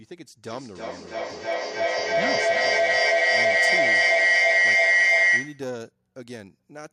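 From 0.48 s to 5.76 s a feedback howl builds as a microphone-to-loudspeaker loop keeps adding gain: a tone near 2 kHz swells, pulsing roughly every 300 ms, to about 15 dB above the speech. A spectrogram shows a bright horizontal band; the waveform balloons.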